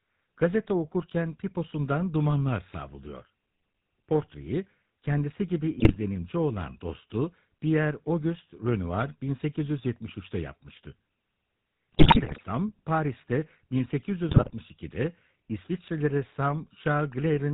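From start to end the speech carries the sound of the GSM full-rate codec, which fits a coder running at about 13 kbps. The codec models the vocal tract and drives it with a coarse, regularly spaced pulse excitation, so the voice has a plainly audible buzzy, gravelly roughness. On a spectrogram the energy stops sharply at 4 kHz, with blank space above, and harmonics look smeared and grainy rather than cleanly striated.

GSM bit errors break the speech three times. The first runs from 5.78 to 5.97 s, between "kendisi gibi" and "olan dostu". The second, and longest, runs from 11.92 to 12.41 s. The third runs from 14.29 to 14.55 s. Corrupted filter, pitch and gain values reach the decoder, so individual frames come out with a warped spectrum or a sudden level jump. These are heard as squawks, pops and gargling. The waveform shows abrupt spikes in these spans, and the spectrogram shows blocky, frame-length smears of misplaced energy.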